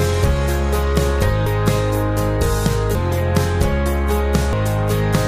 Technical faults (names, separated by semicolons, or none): compressed frames skipped